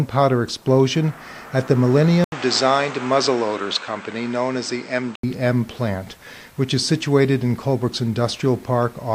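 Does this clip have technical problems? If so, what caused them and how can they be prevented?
Yes. The recording likely switched its input to a poorer device from 2.24 s to 5.23 s. An 80 ms gap marks the switch, then the sound turns duller, with nothing above 8.5 kHz, drops a few decibels, and carries a new, faint noise floor. Prevent this by locking the input device in system settings and disabling automatic switching to headsets.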